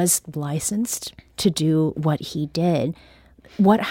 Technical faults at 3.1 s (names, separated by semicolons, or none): drift correction step